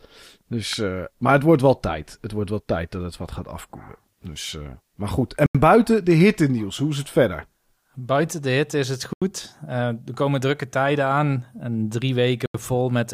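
At 0.73 s a sharp snap sits on top of the speech, most likely an electrical switching spike: a nearby switch, motor or static discharge arcing briefly and coupling into the audio line. It lasts about 2 ms and is heard as a hard click unrelated to the speech. On a waveform it shows as a near-vertical needle standing above the surrounding signal. On a spectrogram it is a thin vertical stripe spanning the full frequency range.

Three blocks of digital silence follow, at 5.46 s, 9.13 s and 12.46 s. Each is about 85 ms long, which fits a 4096-sample buffer going unfilled. The output drops straight to silence and returns with no fade. Each gap is heard as a short hole in the speech. A waveform shows a near-flat line with abrupt walls, and a spectrogram shows a clean vertical dark band framed by thin broadband edge lines.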